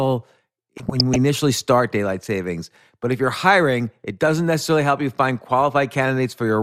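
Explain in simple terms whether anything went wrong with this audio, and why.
Something did go wrong, briefly, from about 0.77 to 1.16 s, just before "initially start daylight savings". That's DAB burbling. Weak digital radio reception let stray bit errors past the error correction, so slices of the sound jumped around and came out with short blips of noise.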